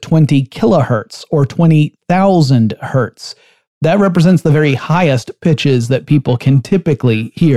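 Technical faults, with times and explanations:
4.03 to 7.56 s, periodic clock jitter: from here to the end the speech takes on a rough, metallic edge that falls away in pauses. The converter's clock is wobbling at around 1 kHz, scattering sidebands about that far either side of each component, worst on higher frequencies.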